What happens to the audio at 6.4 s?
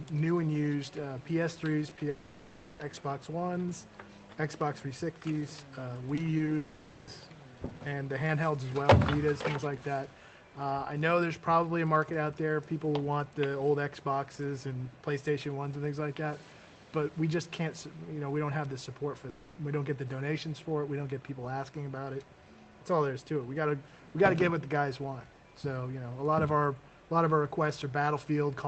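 Two quick bursts of short concealed packet loss hit around 6.37–6.41 s and 6.45–6.49 s: about 20 ms went missing each time, and the receiver patched it by extending the preceding sound, leaving a brief smeary wobble.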